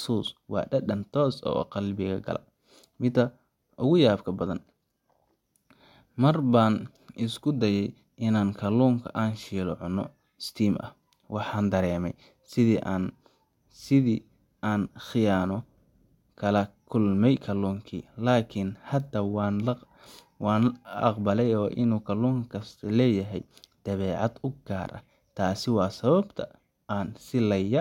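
There are no technical faults to describe in this speech recording.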